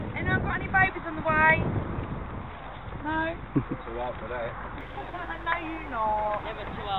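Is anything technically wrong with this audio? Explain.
Yes. From about 4.81 s to the end there's mains buzz, a steady raspy drone around 20 dB under the audio. Something like a dimmer, rectifier or missing shield is letting switching spikes in twice per 50 Hz cycle, spraying harmonics well up into the kilohertz range.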